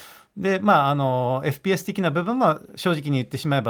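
No technical faults can be heard at any point in the recording.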